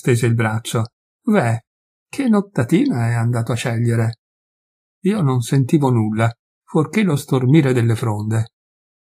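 No technical faults can be heard anywhere in the recording. Nothing in it points to a dropout, a glitch or any other failure along the audio path.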